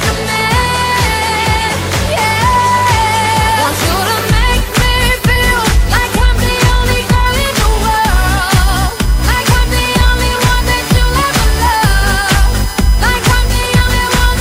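From 7.26 s to the end at 14.41 s the audio carries USB whine: a fixed 1 kHz tone with harmonics, strongest at 5 kHz, roughly 20 dB below the signal. Its 1 kHz spacing matches the bus's 1 ms frames, unlike mains hum's 50 or 60 Hz series.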